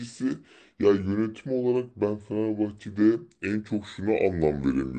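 From start to finish the speech plays back slow and low, the signature of a wrong sample rate. It runs at about 0.73 of its proper speed and sits roughly 5.5 semitones flat, which fits audio recorded at 44.1 kHz being played out at 32 kHz with no conversion. Pitch and tempo drop together, so syllables drag and the voice sounds heavy. On a spectrogram every harmonic and formant band sits proportionally lower, and the waveform's envelope is stretched out in time.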